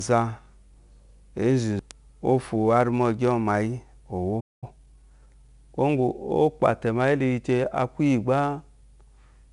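From the first second to the last, the speech carries the grit of 4-bit ADPCM compression. Each sample is coded as a coarse 4-bit step from a prediction, so a broadband hiss rides on every loud syllable and fades with the quiet ones, and sharp onsets crack where the step size lags behind. The damage is plainly audible. On a spectrogram the noise shows as a grainy haze filling the gaps between harmonics, and nothing appears above about 11 kHz, which fits a sample rate near 22 kHz and a rate of about 88 kbps.

At 4.40 s the sound cuts off mid-flow in a playback stall, with roughly 0.22 s of silence before it resumes at 4.64 s. The player likely ran dry of data or had its output thread blocked. The waveform drops to a flat line across that gap, and the spectrogram shows a clean vertical band of empty space.

From 4.64 s to 5.50 s the player works off its backlog with time-compressed catch-up. 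It removes small slices and cross-fades the joins, so the speech runs at 1.25 times normal speed while keeping its pitch. In the waveform, syllables sit closer together than elsewhere. On the spectrogram, the harmonic lines stay at the same height while events crowd together in time, with small seams at the splices.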